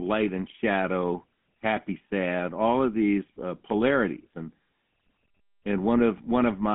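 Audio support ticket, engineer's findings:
GSM full-rate codec artefacts throughout. Speech buzzy and gravelly for the full clip. Nothing above 3.8 kHz; line band roughly 150 Hz to 3.5 kHz. Vocal-tract model driven by sparse regular pulses, so fine excitation detail is lost. Damage plainly audible. Consistent with a 13 kbps GSM full-rate link.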